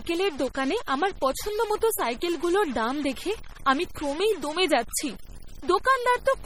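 From start to finish the speech carries a distortion. Even the pauses are filled with noise. The likely cause is a stuck bit, one data bit held at 0 or 1. About half the sample values then shift by that bit's weight, following the waveform.

The whole clip also sounds watery and swirly, with smeared attacks and metallic chirps on s sounds. This is heavy codec damage, likely from MP3 compression at a bitrate around 32 kbps. Weak frequency lines drop in and out between frames. Nothing survives above 21.4 kHz.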